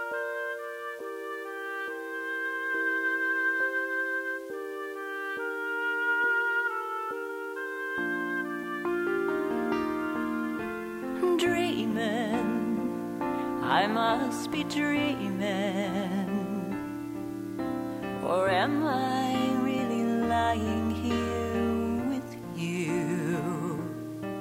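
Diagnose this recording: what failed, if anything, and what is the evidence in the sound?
Low bit depth without dither runs throughout, likely introduced at sample-format conversion, with grit that fits 8-bit rounding. Distortion roughly 30 dB down tracks the sound. The waveform shows stair-steps, and spectrogram noise rises and falls with the signal.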